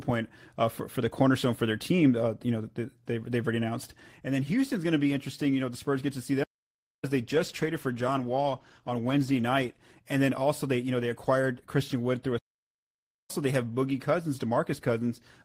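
At 6.43 s, just after "get to see", the speech cuts to silence for about 0.59 s and then picks up again. That's a playback stall, most likely the player running dry on data or its thread getting blocked.

From 7.29 to 9.97 s, right before "and then also they", there's a call bitrate drop. The speech turns rougher and muffled, worst for about 1.9 s, which fits the encoder dropping from roughly 32 to 17 kbps and losing top end.

At 12.38 s it stalls again, for about 0.91 s, between "through a" and "they have".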